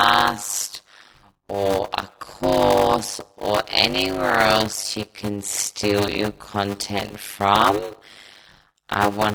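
A block size mismatch with zero padding runs through the whole speech clip. Written blocks, which fit 256 samples, fall short of what the next stage reads, and zeros fill the rest. The gaps buzz at 100 Hz, and speech plays at 0.53 speed, near normal pitch.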